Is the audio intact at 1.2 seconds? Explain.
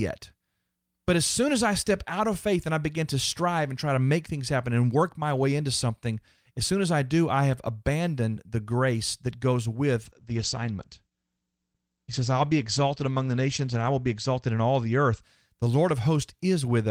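Yes, the speech at 1.2 seconds plays through cleanly with no audible fault at that moment.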